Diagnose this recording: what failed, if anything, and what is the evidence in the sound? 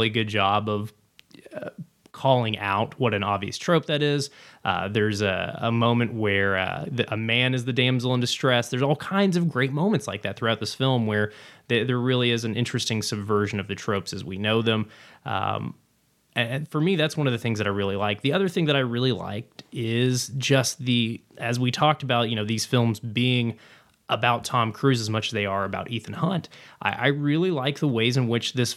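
Nothing in this speech recording points to a failure at any stage of the chain, so there's nothing here to diagnose.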